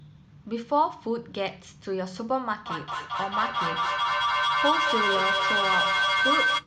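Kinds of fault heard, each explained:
Feedback echo between two devices: a second device in the room replays this microphone's sound, and that replay is picked up again, beyond its own echo canceller. From 2.66 s to the end, repeats arrive about every fifth of a second and build to about 2 dB above the speech.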